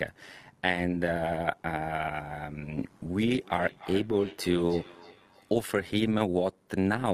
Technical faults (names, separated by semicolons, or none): overlap-add ripple; feedback echo between two devices